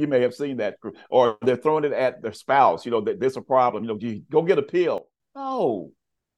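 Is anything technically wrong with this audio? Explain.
Yes. At 4.98 s, just after "you go get a", a sudden gain jump, likely an unramped gain change, drops speech and background together by about 12 dB until 5.2 s.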